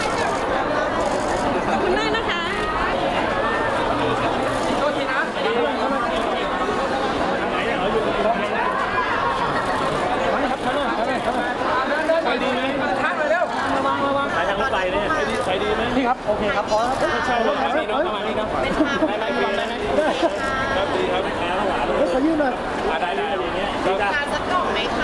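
No technical faults can be heard in this audio. There is nothing to point to at any moment in the sound.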